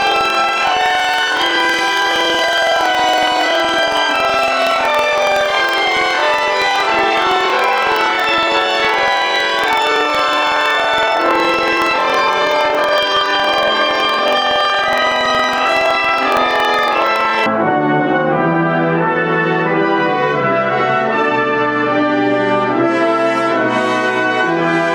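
From the start to about 17.47 s, this is planar audio read as interleaved. Each block keeps all its left samples together, then all its right ones, but the player reads them as alternating pairs. So every 46.44 ms block, which fits a 2048-sample block, plays twice at double speed, left then right. That pushes the sound up a full octave, 12 semitones, with a flutter ticking along at about 21.5 Hz.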